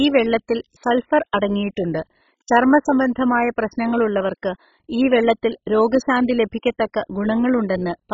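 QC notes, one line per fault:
Throughout: MP2 compression. The speech is dull, with nothing above 7.5 kHz, and carries heavy gurgling, granular distortion. Upper sub-bands are switched off and the remaining bands are coarsely quantised. This is likely MPEG Layer II at a very low bitrate, such as 16 kbps.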